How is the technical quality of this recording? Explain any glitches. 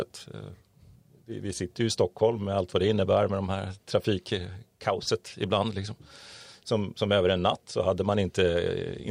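No glitches or technical faults can be heard anywhere.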